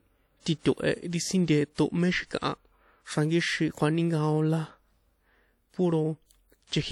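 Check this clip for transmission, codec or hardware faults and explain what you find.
Two faults are present in this speech clip: a codec artefact throughout and a pre-echo near 1.74 s.

Throughout, the speech has plainly audible ringing, washy hiss that swells and fades with the signal, likely WMA compression at a bitrate around 48 kbps. Its long transform blocks smear quantisation noise. Content still reaches 20.1 kHz, so this is not simple band-limiting.

From 1.74 to 1.78 s, a pre-echo appears as a hiss lasting about 42 ms that arrives before a sharp onset and softens it. Noise sized for the loud attack fills the quiet moment ahead of it. Unlike reverb or an echo, it comes before the attack.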